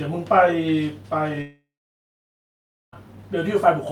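At 1.41 s the speech breaks off in a long network dropout lasting about 1.5 s, to 2.94 s. The last sound is stretched into a fading buzz, after which roughly 1.3 s is near-silent; speech resumes with about 1.5 s missing. This is likely a stall in packet arrival with the receiver concealing the gap. On a spectrogram the final frame smears into blurred horizontal bands that thin out, then an almost empty block before energy returns.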